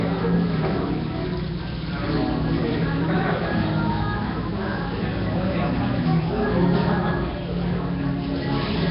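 From start to finish the audio has a rough, hissy fizz wrapped around it and a smeared, watery quality, with nothing at all above 5.3 kHz, so the top end sounds dull and closed off. The damage is heavy and constant, which points to likely Nellymoser compression, the old Flash microphone codec, running at a low rate around 22 kbps. With so few bits per block, quieter bands get no real coding and are replaced with noise, producing the grainy haze.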